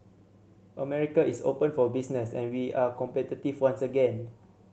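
Speech clip, no faults found.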